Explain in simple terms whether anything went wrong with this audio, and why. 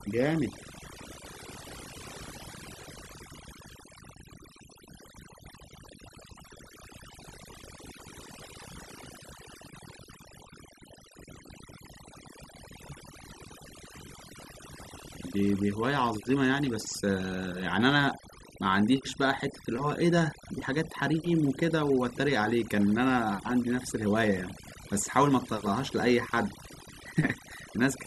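Something did go wrong, and it lasts the whole clip. The problem is overdone noise removal. A cleanup tool meant to take out background noise was pushed too hard. It shuts off any slice of the sound that seems close to the noise. Soft parts of the speech get cut along with it. So the background in the pauses drops away and breaks up into twinkling, warbling specks.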